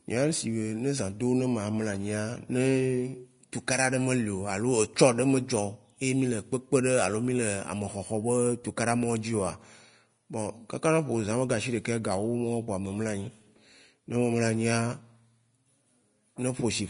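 From start to finish the speech has a hard ceiling near 10.6 kHz, with nothing above it, and the remaining treble sounds hissy and grainy. Sibilants turn to rough noise, tones have a coarse edge, and consonant attacks are softened. This is likely Vorbis compression at a low setting, consistent with roughly 34 kbps: the encoder drops the top band and quantises the upper residue so coarsely that fine detail is replaced by noise of similar energy.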